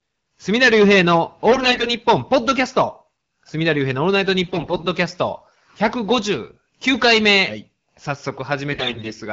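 Throughout, a stage is overdriven by about 13 dB, so a few percent of samples hit the ceiling and are cut flat. This hard clipping adds a harsh fuzz to every loud sound. From 1.51 to 1.94 s, 4.43 to 4.87 s and 8.72 to 9.13 s, AMR bit errors occur: a weak link flips a large share of the less protected bits in the AMR-WB frames. Level and pitch hold roughly steady while the speech turns hoarse, scratchy and gargly over the wideband codec's mild coloration.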